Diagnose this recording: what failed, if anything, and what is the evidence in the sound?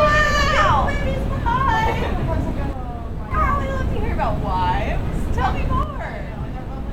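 One channel drops out from 2.73 to 3.31 s and again from 5.83 s to the end. The level falls abruptly by about 6 dB, which is what a mono sum shows when half the stereo pair vanishes, likely an intermittent contact in the analogue wiring.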